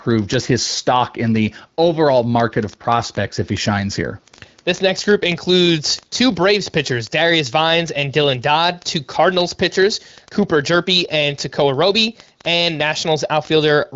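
Word clock ticks run from 0.11 s to the end: an unlocked receiver clock, roughly 0.1% off, slips one sample about every 20 ms, producing a sharp, rapid rattle.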